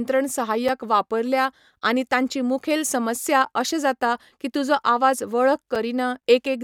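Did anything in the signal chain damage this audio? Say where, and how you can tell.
Yes, three blocks of digital silence at the driver/buffer stage: a 5 ms drop at 0.68 s, just before "वापरल्या आनी तांची मुखेल", a 10 ms drop at 3.45 s between "आनी तांची मुखेल समस्या" and "अशे जाता की तुजो", and a 5 ms drop at 5.75 s. Each is a hard cut to zero and back, short enough to be heard as a tick or dip, which points to output buffers not filled in time.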